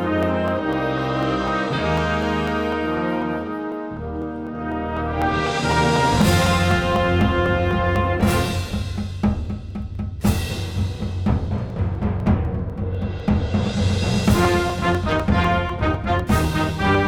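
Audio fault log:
0.23–16.95 s, periodic USB or driver dropouts: a steady tick every 0.25 s, heard only where there is sound. A background task stalls the USB bus or audio driver on a fixed schedule, and each stall skips roughly half a millisecond of audio, leaving an abrupt splice.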